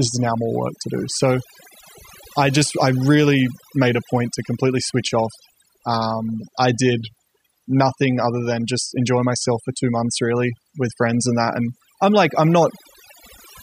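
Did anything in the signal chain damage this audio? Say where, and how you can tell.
Yes: overdone noise removal throughout, at the call-processing stage. A suppressor set too aggressively gates bands near its noise estimate, leaving twinkling specks in near-silence and taking quiet parts of the voice with them.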